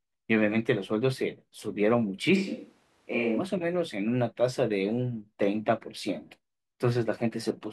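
From 2.38 s to 3.38 s the speech abruptly turns roomy and hollow, loses low-end weight, drops by about 5 dB, and carries more audible background noise, sitting around 40 dB below the speech. This points to a switch to a distant microphone: the close microphone's signal likely dropped out, leaving only a pickup further from the talker, such as a camera's. The return to the close sound at 3.38 s is just as sudden.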